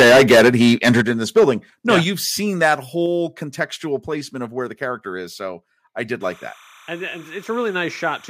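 Right from 0.0 to 1.49 s there's harsh crackle on the peaks, likely microphone overload, with the input driving about 15 dB past the converter's ceiling so the waveform tops get sheared flat. At 1.02 s the level drops abruptly by about 7 dB, likely the call software's microphone volume stepped down in one move. The same thing happens again in a smaller way: overload from 1.89 to 2.0 s (about 6 dB over) and a step down of about 6 dB at 2.04 s, just before "you've seen". Then there's overload from 2.63 to 2.73 s (about 3 dB over) and a final step down of about 4 dB at 3.06 s. After "I did", from 6.21 s to the end, there's a chirpy warble flipping between 1 kHz and 2 kHz at about 20 dB below the signal. That's likely timecode bleed, with 30-frame linear timecode leaking in from a nearby line.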